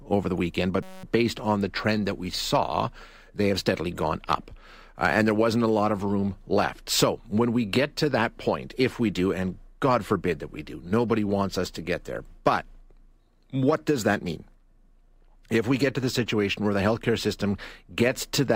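A steady buzz near 188 Hz interrupts the speech from 0.83 to 1.04 s, between "over the weekend" and "based on the trend." It is a system hang loop: playback froze while the hardware replayed one 5.33 ms slice, fitting a 256-sample buffer, 39 times, with essentially nothing lost.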